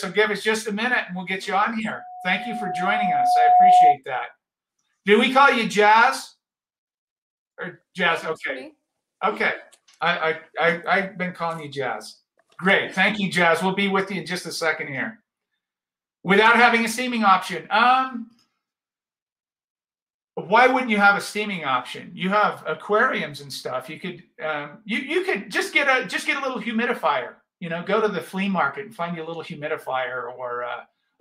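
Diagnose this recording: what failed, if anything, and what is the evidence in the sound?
A pure tone near 726 Hz swells from 1.92 s over roughly a second and a half, sitting about 10 dB above the sound until 3.98 s. This is loudspeaker feedback squeal in the analogue acoustic path. The microphone picked up its own loudspeaker, the loop gain exceeded one at 726 Hz, and that tone kept regenerating.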